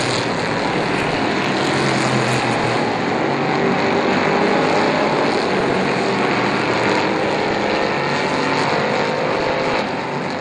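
DAB burbling appears at 0.81–1.21 s, 5.51–5.75 s, 7.43–7.87 s and 9.28–9.83 s. Weak reception lets bit errors slip into the MP2 data, so wrong samples put noise into individual sub-bands. It sounds like short blips of noise over the audio. A spectrogram shows scattered bright rectangular blocks.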